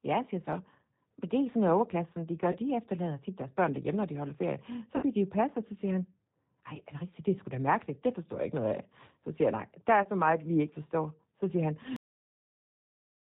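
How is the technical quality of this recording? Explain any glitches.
Technical quality is fair at best: the whole thing runs through a heavily compressed phone-style codec, with three short dropouts and an abrupt ending.

Throughout, this is the G.729 codec at 8 kbit/s, and the damage is plainly audible. It rebuilds speech from a vocal-tract model, a pitch predictor and a few pulses per short frame, so nothing above 4 kHz survives and the voice comes out muffled, slightly rough and synthetic.

The VoIP packet loss concealed by the speech codec hits at 2.52–2.58 s, 4.96–5.03 s and 10.03–10.09 s. The first and last each lose about 20 ms, which points to a single dropped packet, and the middle one loses 60 ms, which fits three in a row. The decoder fills each gap by stretching its last pitch and filter into a buzzy tone or coloured noise that fades, and the voice stays weak or distorted for tens of milliseconds afterwards.

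Finally, there's a cut-off end at 11.96 s. The last buffers never got written, so the audio stops mid-sound and drops straight to digital silence with no natural decay, and that silence runs to the end of the clip.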